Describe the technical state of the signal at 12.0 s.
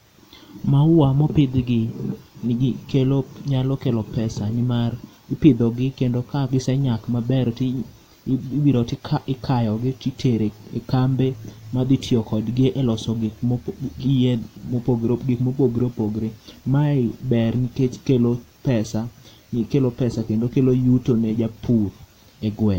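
At 12.0 s the speech signal is intact, with no audible fault at that point.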